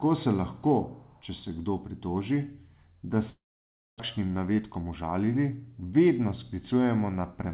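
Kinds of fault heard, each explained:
Long network dropout: from 3.3 to 4.02 s, likely lost packets; a fading buzz gives way to silence, a blank spectrogram gap and flat waveform.
Jitter buffer speed-up: from 4.17 to 5.03 s, trimmed pitch periods make speech run at 109%; the waveform is time-compressed while spectrogram harmonics keep their spacing.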